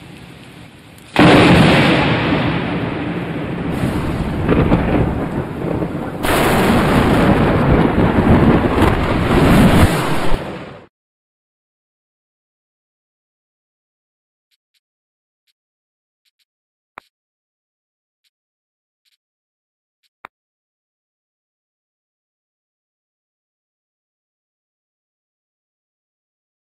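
Throughout the clip there is channel delay (comb filtering). One channel arrives a few samples late, well under a tenth of a millisecond, and when the two are folded to mono, content shared by both cancels at regularly spaced frequencies. The first deep notch falls around 7 kHz, so the top end sounds dulled and hollow. A spectrogram shows a fixed dark horizontal band near 7 kHz, unchanging over time, while the waveform looks unremarkable.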